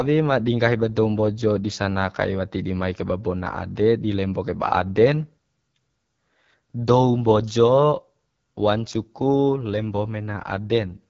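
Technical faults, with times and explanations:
Throughout, AMR wideband (HD Voice) codec: the speech has the rough, raspy texture of AMR-WB running at one of its two lowest modes, which fits the 8.85 kbit/s rate. Below 6.4 kHz the codec rebuilds the voice from a vocal tract model driven by sparse pulses, and at this rate those pulses are too coarse to hold the fine structure. The top band is only shaped noise, and nothing is present above 7.5 kHz.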